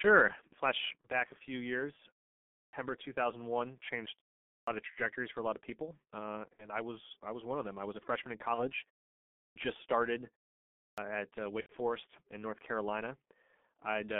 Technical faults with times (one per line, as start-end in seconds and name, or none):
0.00-14.19 G.723.1 codec
1.01-1.08 VoIP packet loss concealed by the speech codec
2.58-2.73 clipped start after a pause
4.53-4.67 clipped start after a pause
6.53-6.69 VoIP packet loss concealed by the speech codec
8.54-8.71 VoIP packet loss concealed by the speech codec
9.41-9.56 clipped start after a pause
10.83-10.98 clipped start after a pause
11.60-11.73 VoIP packet loss concealed by the speech codec